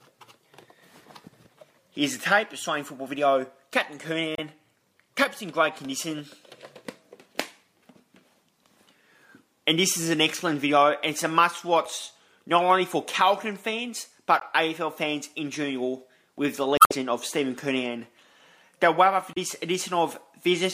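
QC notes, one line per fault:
4.35–4.39 s, 11.85 s, 14.40–14.43 s, 19.33–19.37 s: damaged data in a compressed stream. Short chirps or blips where corrupt frames are misdecoded and the decoder resyncs on the next header. Each shows as a thin broadband vertical smear on a spectrogram, with an abrupt step in the waveform.
16.76–16.92 s: damaged data in a compressed stream. A longer squawk as the decoder loses sync. It adds 64 ms of garbled output and appears as a wider smeared band with a waveform discontinuity.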